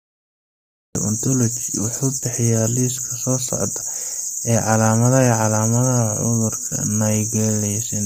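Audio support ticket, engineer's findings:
Cut-off start: digital silence from 0.00 to 0.95 s, then speech enters mid-sound at 0.95 s with no attack or onset ramp. Probable component: capture or stream start, late by roughly a second. Distinct from a fade-in or noise-gate opening because the level jumps straight to full within a single instant, with no gradual rise.

Low-delay AAC compression, throughout: speech is heavily rough and grainy, with noise filling the gaps between harmonics and a top band that sounds lowered or synthetic. Likely component: AAC-ELD encoder at a low bitrate, consistent with about 24 kbps. Too few bits per frame leave the fine spectral detail coarsely quantised. Distinct from dropouts or packet loss because the damage is continuous, with no gaps or repeats.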